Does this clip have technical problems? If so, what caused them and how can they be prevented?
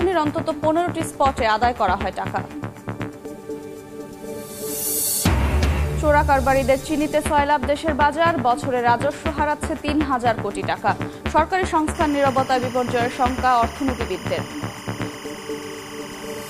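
Yes. From 11.95 s to the end, there is timecode bleed: linear timecode running at 25 frames per second on a nearby track or cable leaked into this audio path. The square-wave code flips between pitches around 1 and 2 kHz, so a steady chirping warble sits behind the sound, roughly 15 dB below it. Keep timecode lines physically separated and shielded from audio cables, and record timecode on an isolated track with adequate channel separation.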